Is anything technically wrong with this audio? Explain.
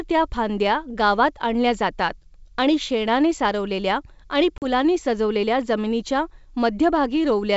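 Yes. Between 4.58 and 4.66 s, just after "आणि शेणाने सारवलेल्या आणि" and before "सजवलेल्या जमिनीच्या", there is packet loss on an ADPCM call. About 40 ms of audio, roughly a couple of packets, drops out and is filled with silence, leaving a hole with hard edges. Because ADPCM decoding depends on predictor and step-size state built from previous samples, the decoder loses track of the sender. Speech resumes slightly distorted, and settles by about 4.66 s. The wideband coding itself sounds clear to around 7 kHz with only faint upper-band hiss, which fits G.722 running at full rate, 64 kbit/s.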